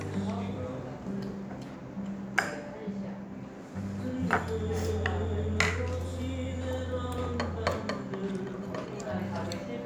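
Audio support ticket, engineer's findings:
No audible faults found on review of this sound clip. Nothing to escalate; closing as no issue reproduced.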